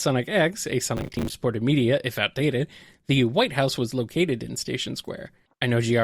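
Processor overload crackle runs from 0.97 to 1.34 s in this speech recording: a short burst of gritty tearing laid over the sound. The processing could not finish its small audio buffers on time, around 10 ms each, and missed about twenty deadlines over that stretch. Each miss replayed a fragment of stale audio with hard edges, and the rapid chain of those jagged repeats is heard as crackle until the load eases.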